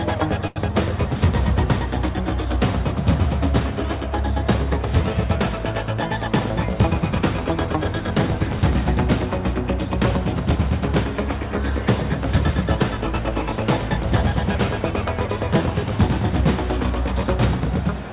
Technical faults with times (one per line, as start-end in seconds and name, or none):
0.47-0.74 short stall from a late packet
12.97-13.91 jitter buffer speed-up